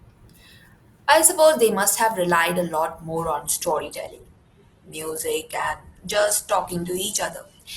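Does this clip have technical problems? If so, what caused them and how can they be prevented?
Yes. From 3.41 s to the end, an adaptive stream at a lower bitrate takes over: nothing above 12.1 kHz and smeared texture, consistent with Opus near 12 kbit/s. The switch is abrupt with no gap, unlike packet loss. A larger playback buffer and a steadier connection let the player stay on the higher-bitrate version.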